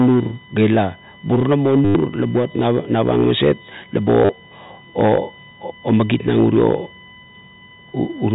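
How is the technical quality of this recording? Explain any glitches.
The recording has two technical problems. A steady whine runs through the whole speech clip, and the audio stutters twice. It also has the narrow telephone bandwidth of G.711 coding, with nothing above 4 kHz.

USB whine is present from start to end. It is a fixed tone at 1 kHz, strongest at its 2 kHz harmonic, around 25 dB below the speech. The USB bus draws current in regular 1 ms frames. That current ripple leaks into the audio through power or ground, producing a constant pitched whine.

Packet loss with the last packet repeated occurs at 1.85 to 1.95 s, just before "la buat", and at 4.25 to 4.29 s. The gaps last 100 ms and 40 ms. The receiver filled each gap by replaying the last packet. The result is a short robotic buzz near 100 Hz, which fits 10 ms packets.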